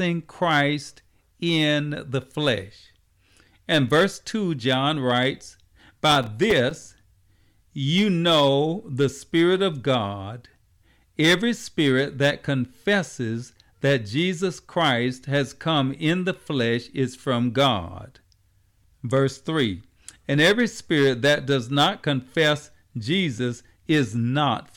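From 6.12 to 7.03 s the speech is torn by processor overload crackle. Over that stretch the processing falls behind and misses around twenty of its small buffers, each only a few milliseconds long. Every miss leaves a brief hole of silence with hard edges, and together they sound like a gritty burst of crackle riding on the speech. Unlike a single dropout, this is a dense cluster of tiny gaps, and it clears once the load passes.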